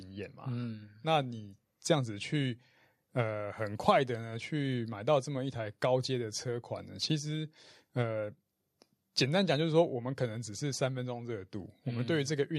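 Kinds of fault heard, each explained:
No faults can be heard anywhere in this speech.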